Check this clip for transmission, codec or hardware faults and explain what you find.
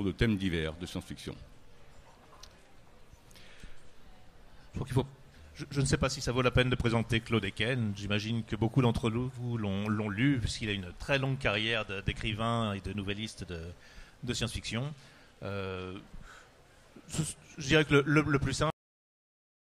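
One fault is present: a cut-off end. At 18.70 s the sound stops mid-event and drops straight to digital silence, which lasts the remaining 0.98 s of the clip. There is no decay or fade; the signal simply ceases. The final stretch of audio buffers was never written or played out, so whatever was sounding at that moment is truncated rather than allowed to finish.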